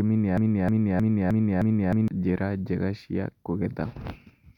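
From 0.38 to 2.08 s, a broken-record loop repeats a 310 ms fragment five times back to back, likely from a stalled player resending its last buffer; the intervening speech is lost.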